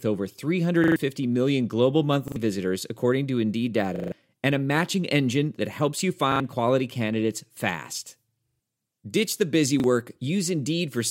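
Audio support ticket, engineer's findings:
Repeated buffer stutters at 0.84–0.96, 2.28–2.36 (after "million global"), 3.96–4.12, 6.32–6.4, 8.48–8.6 and 9.8–9.84 s. The same slice loops with hard joins, which fits a 40 ms buffer: a playback underrun, so the device replays the last block and loses up to about 150 ms each time.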